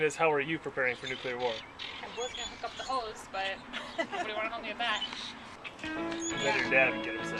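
No technical faults can be heard anywhere in this audio.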